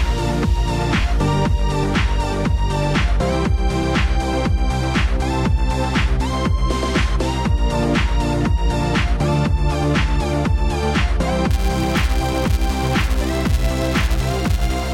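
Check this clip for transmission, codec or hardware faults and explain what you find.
Two faults are present: a single repeated frame near the start, and a filter restarting on every block in the last few seconds.

At 1.01 s there are repeated frames. One compressed frame about 23.2 ms long is decoded and played twice. That frame length fits a 1024-sample frame at 44.1 kHz. The duplicate creates a brief stutter. The clip is lengthened by 23.2 ms.

From 11.51 s to the end at 14.94 s, a filter is restarted on every block. It discards its internal state at each block boundary and begins every block from silence, so each block opens with a small transient. The transients repeat at 345 Hz, which points to a 128-sample block. The result is a steady buzz at that pitch, overlaid on the audio, whose loudness rises and falls with the signal level.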